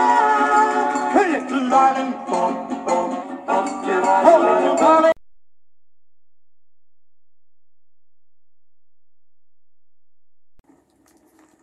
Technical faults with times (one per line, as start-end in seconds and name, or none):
1.59-3.23 drift correction step